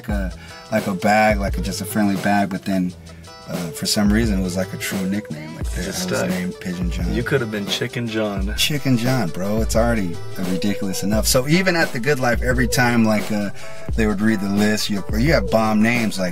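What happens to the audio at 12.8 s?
At 12.8 s the audio is inside a DC step that began at 8.57 s and lasts to the end of the clip. The waveform's zero line jumped to a new level at that point, as happens when a converter recalibrates or an input carrying an offset is switched in. The offset is still in effect at 12.8 s, while the sound itself goes on unchanged. The step itself registered as a low thump or click at 8.57 s.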